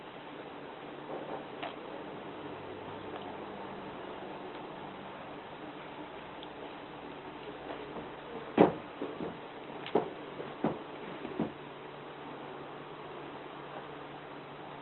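No technical faults can be heard in this audio.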